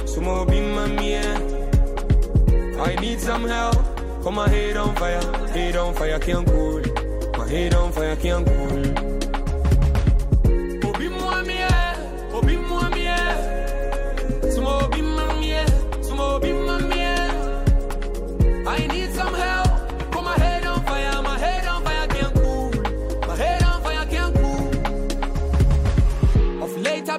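Overlap between stream segments skips the audio at 1.97–1.99, 3.98–4.00, 9.95, 11.95, 15.93–15.95, 17.91, 19.90 and 21.86 s: 8–26 ms is trimmed away just before 2-second segment boundaries, and the waveform jumps without the gap of silence a dropout would leave.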